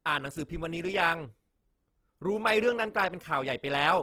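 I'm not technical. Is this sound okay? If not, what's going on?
No. The speech sounds grainy and rough from start to finish, with a plainly audible noisy fizz where clean detail should be. That is likely Opus compression. Squeezed into too little data, it fills gaps with noise, which roughens the sound.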